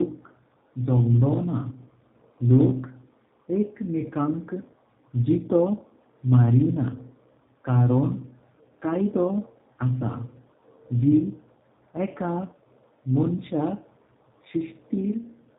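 Speech with tandem speech coding all the way through: it's been squeezed by two low-rate speech codecs in a row, so the second coder is modelling the first one's already mangled output. You hear that stacking as a rough, warbly, muffled quality, worse than a single coder would give, and nothing gets through above 3.8 kHz. The character fits a mobile AMR-NB leg handed over a G.711 link into G.729A.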